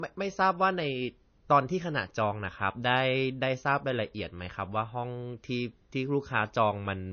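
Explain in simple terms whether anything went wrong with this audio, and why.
Low-bitrate audio saved at a high bitrate: throughout the speech, nothing above 6.5 kHz survives. It was likely squeezed small first, then re-saved large, which cannot restore the lost detail.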